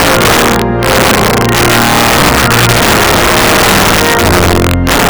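Throughout the clip, integer overflow: a gain stage drives the signal about 7 dB past the largest integer value, and instead of being limited, every peak wraps to the opposite sign. A small share of samples is affected, and the louder moments break into violent cracks, far harsher than clipping.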